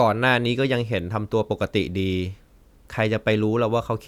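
Listening through the speech, nothing stood out as a technical fault at any point.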